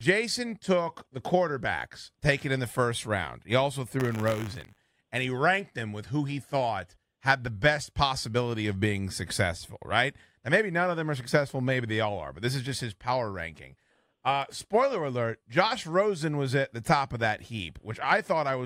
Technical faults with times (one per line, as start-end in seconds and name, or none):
3.99-4.99 buffer tearing